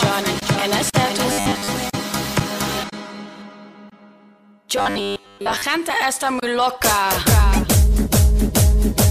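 From 1.32 to 1.68 s and 4.77 to 5.62 s, robotic sound from repeated short buffers gives a rigid 100 Hz buzz. The likely cause is most of the audio being skipped and replaced by 10 ms repeats, which show as evenly spaced vertical striations and a repeating waveform.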